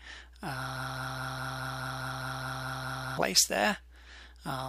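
A broken-record loop runs from 0.76 to 3.18 s: a roughly 207 ms fragment repeats twelve times back to back, likely a stalled player or stream, so the original audio there is lost.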